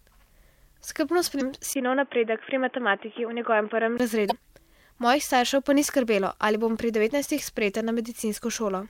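Damaged data in a compressed stream first appears at 1.37–1.42 s: corrupted bytes make the decoder misread frames and hunt for the next header, leaving a brief glitch.

An input switched to a poorer device follows from 1.73 to 4.00 s. After a 20 ms gap the speech turns boxy, with nothing above 3.5 kHz and a new noise floor roughly 30 dB down, while loudness stays about the same. A likely cause is a change to a narrower-band microphone or headset profile.

The same damaged-data blip recurs at 4.27–4.32 s and at 7.36–7.40 s, the latter right after "skrbelo ali bom pri".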